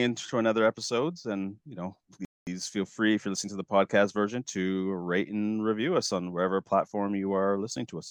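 At 2.25 s, after "episodes and you know", the speech cuts to silence for about 0.22 s. This is a playback stall. The player likely ran short of data or was blocked. Sound resumes at 2.47 s with "feel free if you're".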